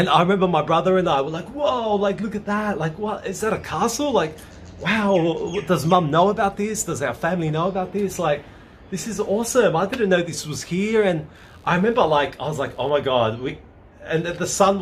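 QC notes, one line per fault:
5.04 s, 9.87 s and 13.88 to 13.91 s: corrupt frame decoded. A damaged compressed frame plays with misread gains, giving brief blips that show as thin vertical smears on a spectrogram. The last blip spans about two frames and is quieter.
10.8 to 13.1 s: computer activity noise. Computer load changes disturb the shared audio ground, adding a faint buzz pulsing around 70 times per second, roughly 40 dB below the sound, visible as evenly spaced spectrogram striations.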